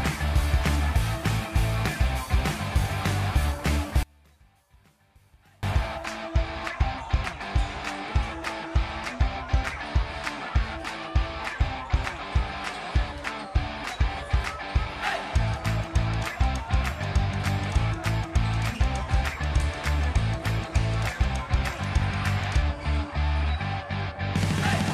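One channel inverted, from 4.03 to 5.63 s: the sound abruptly drops by about 34 dB for roughly 1.6 seconds, leaving only a faint residue before the full level returns. The likely cause is one stereo channel flipping polarity, so that anything common to left and right cancels when the two are summed to mono. What survives is just the small difference between the channels, which is why the sound nearly disappears.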